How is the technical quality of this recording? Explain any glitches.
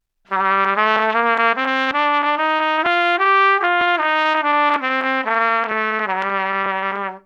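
The recording has one recurring glitch. Audio missing between chunks occurs at 0.96, 1.91, 2.86, 3.81, 4.76, 5.71 and 6.66 s. Each time about 50 ms vanishes, and the sound jumps straight ahead. The likely cause is a processor working in 1-second chunks that drops a sliver at each handover.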